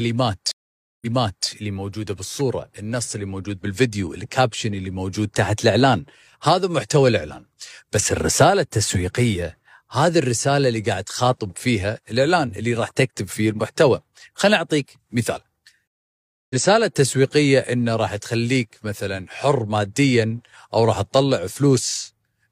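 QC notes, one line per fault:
0.51–1.48 s, stream reconnect: the connection dropped for 0.5 s, then a fresh decoder resumed 0.46 s earlier, so a moment of speech repeats. The waveform shows a flat gap, then a fade-in, and the spectrogram an empty column.
15.87–16.56 s, stream reconnect: 0.63 s of silence, then playback rejoins roughly 0.7 s later in the live stream, skipping speech. The waveform shows a flat gap ending in a soft onset, and the spectrogram a blank vertical band.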